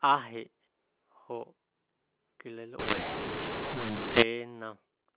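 From 2.79 to 4.22 s, the speech shows a mu-law and A-law mix-up. The telephone audio was coded with mu-law but decoded as A-law. The two logarithmic scales map levels differently, so sample values come out scrambled. Some peaks grow too large and others shrink. The quietest samples rise well above silence. The speech turns harsh and distorted, and gaps fill with noise. Outside that stretch, the G.711 telephone coding keeps its usual 4 kHz band limit.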